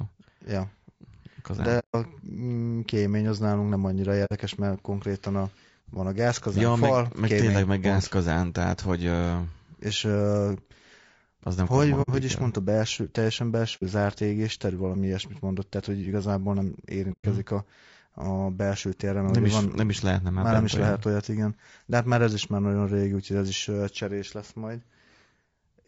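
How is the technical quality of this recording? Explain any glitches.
The speech has two faults: grainy coding damage throughout and five short dropouts.

Low-delay AAC compression, throughout: the voice is rough and grainy, with noise between harmonics and a thin, synthetic top band. This is likely AAC-ELD at about 32 kbps, whose short frames resolve pitch poorly.

AAC frame loss with muting, at 1.79–1.95 s, 4.25–4.32 s (after "az nálunk nem annyira"), 12.02–12.10 s (after "az nem hogy"), 13.76–13.83 s and 17.12–17.25 s (after "tehát hogy igazából nem"): the decoder zeroed the missing frames, so the sound fades into soft-edged holes of 60 to 150 ms.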